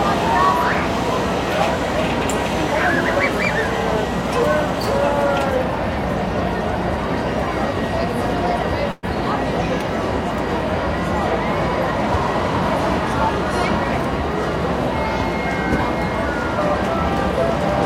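At 8.91 s the audio stalls for about 0.12 s, a call audio freeze. The last bit of sound gets stretched into a short fading buzz, then things pick up exactly where they left off at 9.05 s, so nothing's lost but everything after runs roughly 115 ms late. That's most likely packets held up in transit, with the jitter buffer running dry and the receiver papering over the wait until they arrived.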